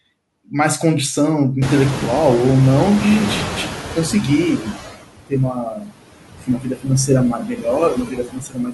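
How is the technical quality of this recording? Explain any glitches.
The recording has clear processing faults, all from the noise suppressor.

Noise suppressor artifacts run through the whole clip. The suppressor cuts the steady background by about 21 dB frame by frame, so the leftover noise drops away between words and returns under them.

Noise suppressor catching up, from 1.61 s to 4.78 s. The room noise jumps by about 25 dB around 1.5 s, and the suppressor's noise estimate needs about 3.2 s to follow. During that stretch the noise is cut by only about 13 dB, so it comes through with less reduction before sinking.

Speech cut by the noise suppressor, at 4.59–4.76 s, 5.53–5.96 s, 6.41–6.90 s, 7.32–7.66 s and 7.92 s to the end. The suppressor mistakes parts of the speech for noise and pulls them down by about 9, 22, 18, 14 and 20 dB, each over a tenth of a second to most of a second. 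Those syllables sound swallowed or faded.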